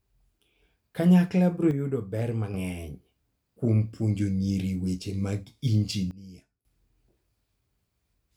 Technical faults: sudden gain jump

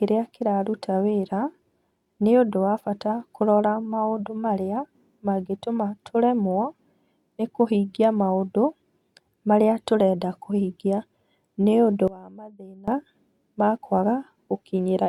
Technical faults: one channel inverted

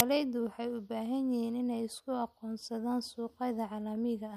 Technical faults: file tags played as audio

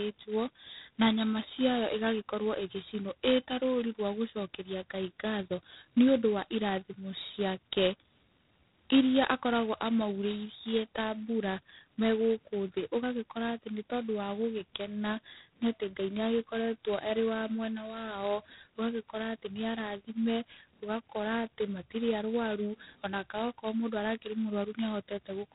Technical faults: G.726 ADPCM

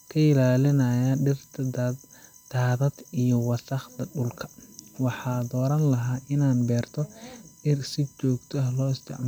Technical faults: USB whine

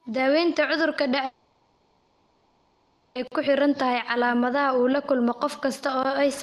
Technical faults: long network dropout; block of digital silence

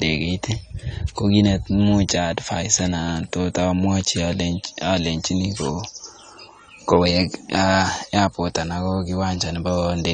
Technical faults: AAC compression

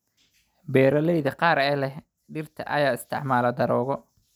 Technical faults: block of digital silence

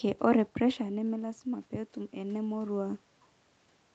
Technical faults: automatic gain rising

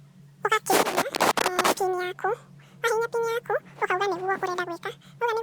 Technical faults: audio read two samples at a time (double speed)

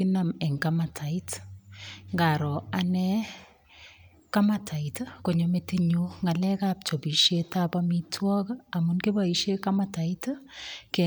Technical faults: none

